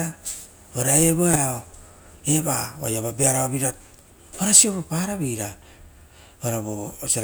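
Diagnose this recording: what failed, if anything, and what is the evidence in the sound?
Network stage: frames out of order at 1.33 to 1.38 s. Two adjacent 20 ms frames play swapped, giving a brief garbled flutter. Unlike a dropout, no time is lost.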